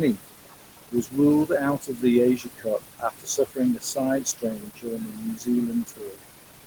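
Noise suppressor artifacts run through the whole speech clip. The room noise sits only about 9 dB below the speech, so the suppressor works hard. It pulls the noise down by about 20 dB in the gaps between words. Under the words it lets the noise back up. So the background pumps up and down with the speech. The suppressor decides band by band, frame by frame.

Speech cut by the noise suppressor follows, six times. The spans are 0.9 to 1.17 s, 1.8 to 2.04 s, 2.37 to 2.67 s, 2.87 to 3.98 s, 4.22 to 5.49 s and 5.68 to 6.21 s. The suppressor mistakes quiet parts of the speech for noise and turns them down with it. The drops reach about 17 to 22 dB. The short spans each lose a brief moment. The 4.22 s span loses about a second in total. Endings and soft sounds come out swallowed or faint.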